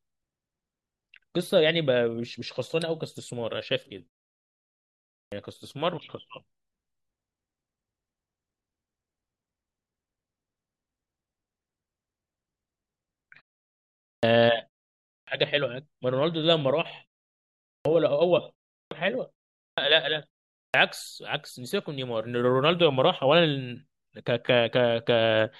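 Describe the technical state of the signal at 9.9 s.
At 9.9 s the speech signal is intact, with no dropout, distortion or other fault to be heard there.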